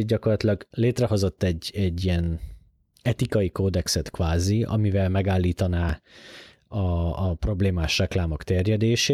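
At 6.91 s there's a single sharp click in the speech, just before "a problémás". It sounds like dropped samples, likely only a couple of them, a few hundredths of a millisecond' worth. Nothing audible is lost, but the waveform jumps straight from one value to a later one. That step is what you hear as the tick, and it shows up as a thin vertical line right across the spectrum.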